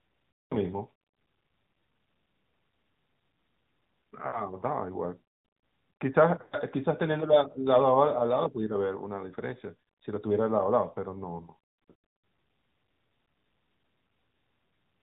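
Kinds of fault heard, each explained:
AMR narrowband mobile codec: The speech runs through a mobile vocal-tract model sampled at 8 kHz, so nothing above 4 kHz survives. It is plainly buzzy and synthetic, which fits an AMR mode near 10 kbps. Unlike simple low-pass filtering, the tone itself sounds coarsened.
lost AMR speech frames: Failed frames force the decoder to repeat its last pitch and vocal-tract settings at falling gain. The sound smears and fades rather than clicking off, near 0.33, 6.42 and 11.80 s, for 100 to 180 ms each, the last one scattered across 240 ms.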